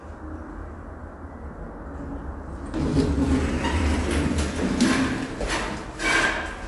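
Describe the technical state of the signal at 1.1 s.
At 1.1 s the audio carries MP3 compression damage, which is likely the cause, and it runs through the whole clip rather than just this moment. Nothing is present above 11.3 kHz, so the treble stops dead at a fixed ceiling. Below that, the encoder has too few bits and drops weak frequency detail, which flickers in and out between frames. The result sounds watery and swirly, and sharp onsets blur. The damage is plainly audible and fits a low bitrate near 48 kbps.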